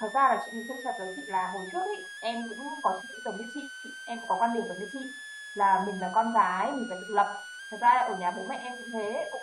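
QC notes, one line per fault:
Throughout: switching supply whistle. A high whine sits under the speech, centred around 1.5 kHz and wandering between 1.44 and 1.88 kHz, at roughly 15 dB below the speech. A switching power supply running in an audible burst mode or beating with another one makes that drifting tone.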